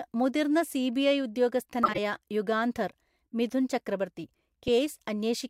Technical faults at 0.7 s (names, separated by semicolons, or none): none